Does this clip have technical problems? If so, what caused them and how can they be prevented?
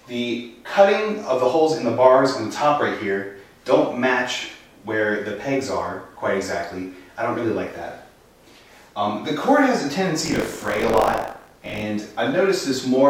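Yes. From 10.24 to 11.82 s, buffer tearing produces a steady 50 Hz rattle. In each 20 ms period, about a fifth of the buffer replays audio from roughly 40 ms earlier, with hard joins on both sides. Unlike scattered dropouts, the rattle is continuous and present only while sound plays. Keeping the writing program well ahead of the hardware's read position prevents it.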